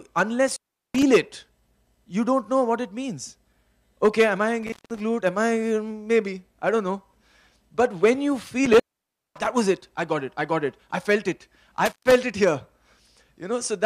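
Intermittent contact at 0.48–1.03, 4.63–5.00, 8.66–9.50 and 11.86–12.12 s: a loose cable or plug briefly opens, cutting the audio for 0.13–0.56 s with crackle at each edge.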